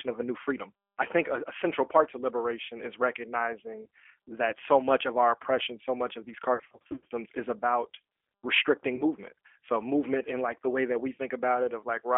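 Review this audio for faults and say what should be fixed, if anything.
The G.729 codec runs through the whole speech clip, and its damage is plainly audible. The sound points to the 8 kbit/s G.729A variant. Each short frame is rebuilt from a vocal tract filter, a pitch predictor and a handful of pulses, so the speech comes out rough and slightly synthetic. The line band is 300 Hz to 3.4 kHz, which removes the low body and all upper detail. To prevent this, carry the call on a wideband codec such as G.722 or Opus at a higher bitrate.

VoIP packet loss concealed by the speech codec appears twice. The first event runs from 6.54 to 7.05 s. About 360 ms of audio is missing, spread across roughly 560 ms in short gaps of up to 40 ms. The decoder fills each gap by extending its last pitch and filter at falling gain, which produces buzzy, smeared stretches. Because each frame builds on the previous one, the speech stays weak for a moment after each gap. 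The second event runs from 8.96 to 9.03 s, where about 30 ms is concealed the same way. To prevent this, fix the network loss with QoS priority for voice traffic and a properly sized jitter buffer, and add forward error correction if the link remains lossy.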